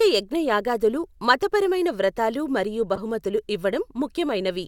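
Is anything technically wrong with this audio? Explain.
Yes. Corrupt frame decoded, 2.95 to 3.00 s, right after "యజ్ఞయాగాదులు మతపరమైన వ్రతాలు మరియు": damaged bits in what sounds like a couple of compressed frames were played anyway. Misread gains and codes put energy at wrong frequencies, heard as a brief chirp, squeak, blip or burst of noise peaking around -20 dBFS.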